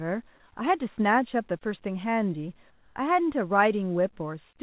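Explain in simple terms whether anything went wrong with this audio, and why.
From 2.7 to 2.96 s, about a quarter of a second, the real background behind the speech gives way to a smooth, quieter hiss. This is comfort noise in place of the background, likely because the sender briefly stopped transmitting. Unlike a dropout, the pause isn't silent.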